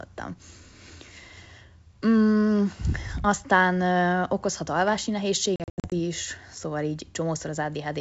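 From 5.56 to 5.94 s the speech breaks up with packet loss on an ADPCM call. About 220 ms of audio drops out across that 360 ms stretch, in hard-edged silent gaps, the longest about 80 ms. The holes suggest around ten lost packets. Each time the sound returns, the decoder's predictor and step size no longer match the sender's, so the speech comes back with brief, slight distortion before settling.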